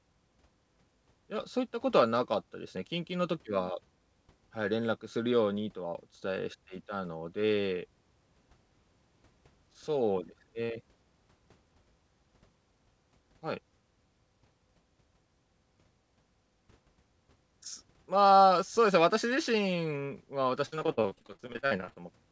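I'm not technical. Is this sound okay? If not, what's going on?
No. From 20.66 to 22.01 seconds the sound turns choppy and robotic. This is repeated packet loss: about 25 bits of audio went missing and were patched over.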